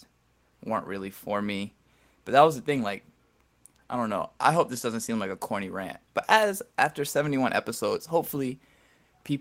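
No technical faults are audible anywhere in the recording.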